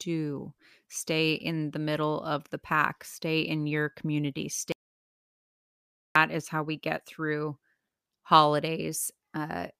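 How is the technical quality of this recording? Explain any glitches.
The recording has one clear glitch. From 4.72 to 6.16 s there is an audio dropout to silence: the speech stops abruptly and about 1.4 s falls to silence, with no room tone, before resuming mid-flow. Likely cause is a lost input signal while the recorder kept writing zeros.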